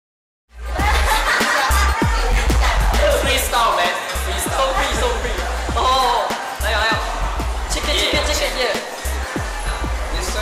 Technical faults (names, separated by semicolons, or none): hard clipping